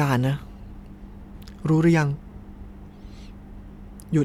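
No technical faults are audible.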